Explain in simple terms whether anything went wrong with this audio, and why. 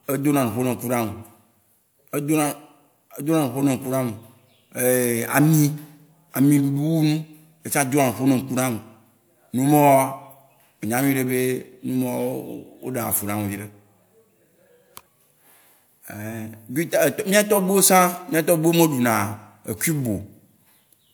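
Nothing went wrong here.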